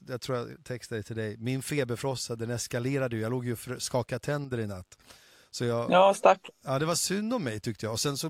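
One stereo channel likely drops out from 4.45 to 4.52 s, between "låg ju och skakade" and "i natt". Once the channels are summed to mono, the speech falls abruptly by about 6 dB for that brief 74 ms stretch, then snaps back to full level.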